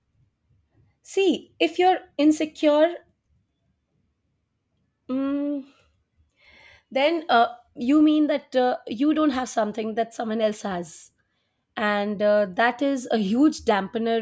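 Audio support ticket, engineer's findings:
Listened through the speech recording in full and nothing stood out as a problem.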